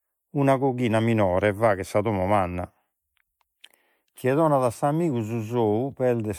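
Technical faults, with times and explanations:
Throughout, generation loss: the speech sounds swirly, smeared and hollow, with blurred attacks and no content above 19.9 kHz, more damage than the bandwidth alone suggests. Likely it was re-encoded with MP3 about five times, each pass requantising on a shifted frame grid and compounding noise and spectral holes, consistent with roughly 96 kbit/s.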